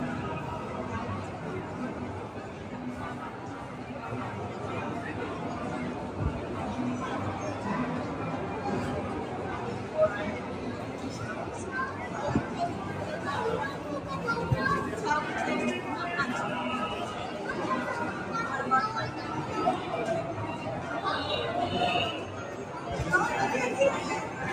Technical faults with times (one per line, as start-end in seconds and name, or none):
0.00-24.52 noise suppressor applied to music or sounds